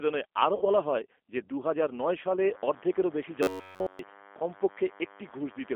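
Narrow, slightly rough and synthetic speech runs through the whole clip, with nothing below about 250 Hz or above about 3.4 kHz and plainly audible coding damage. That is the G.729 codec (G.729A), which fits an 8 kbit/s stream. It rebuilds each 10 ms frame from a vocal tract filter, a pitch predictor and a handful of pulses rather than the actual waveform, so the speech gets a processed, grainy edge. From 0.55 to 0.65 s, just before "বলা হয় যে দুহাজার", the sound smears into a buzzy tone or coloured noise that fades, and stays weak or distorted as speech resumes. This is VoIP packet loss concealed by the speech codec. About 60 ms of audio went missing, which points to two lost packets. The decoder filled the gap by stretching its last pitch and filter settings while lowering the gain, and because each frame builds on the previous one, the recovery lags behind the returning packets. From 3.43 to 3.99 s the speech collapses into a rigid, metallic buzz at about 94 Hz that only loosely tracks the speech underneath. 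This is robotic sound from repeated short buffers, likely caused by audio arriving too seldom, with the playback software looping the last block of roughly 10.7 ms over essentially the whole stretch. That block length sets the fixed pitch.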